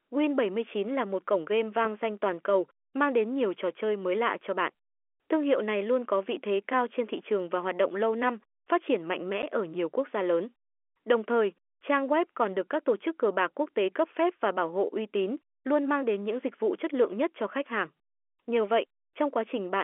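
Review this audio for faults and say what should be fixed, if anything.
Packet loss filled with silence at 9.42 s: a 10 ms hole with hard edges, which fits one lost packet replaced by silence. Fix it with packet loss concealment and a jitter buffer that interpolates missing audio instead of muting it.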